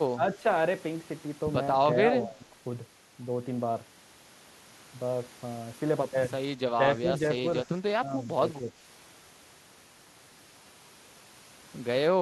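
Speech ducks by about 10 dB at 0.15–0.44 s, 2.12–2.41 s and 8.57–8.74 s, and by about 15 dB at 6.69–7.46 s and 7.63–8.41 s. The cause is likely speech suppressed in double talk. Unlike a dropout, the level sinks partway instead of falling to silence.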